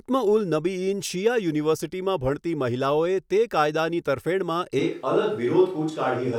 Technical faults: switch to a distant microphone

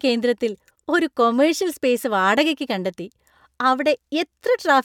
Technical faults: none

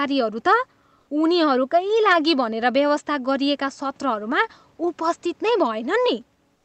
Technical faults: comfort noise in place of the background

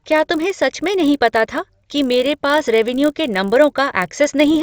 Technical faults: resampler restarted on every block

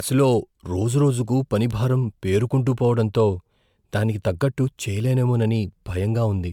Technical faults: generation loss; bit error spike

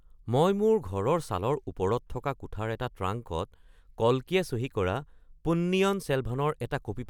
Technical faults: none

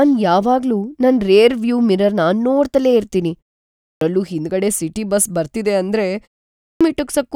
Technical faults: clipped start after a pause

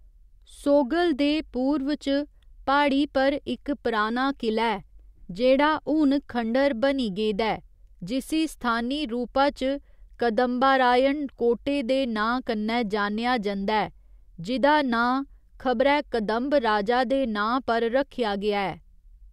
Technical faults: none

